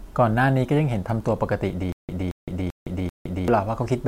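From 1.92 s to 3.48 s the speech falls into a stutter with silent gaps: a 225 ms fragment repeats four times, every 389 ms, with 164 ms of digital silence between. A stalled stream likely replayed its last buffer. The waveform shows identical blocks between flat lines.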